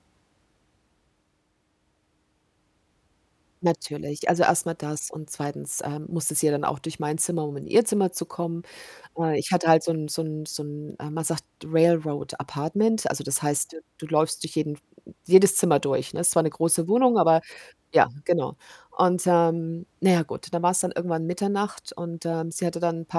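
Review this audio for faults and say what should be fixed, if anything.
Nothing needs fixing: the speech recording shows no technical faults at any point.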